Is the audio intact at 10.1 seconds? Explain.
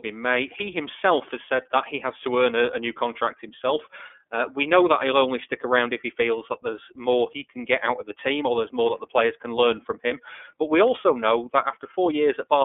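No. Just after "players can learn from", lost iLBC frames leave a gap from 10.08 to 10.12 s, which fits one missing 30 ms frame. The decoder fills it by repeating the last pitch cycle mixed with noise, heard as a brief held, buzzy vowel before clean recovery. The iLBC codec also applies here, limiting the sound to a 300 to 3500 Hz band and giving it a plainly rough, synthetic texture.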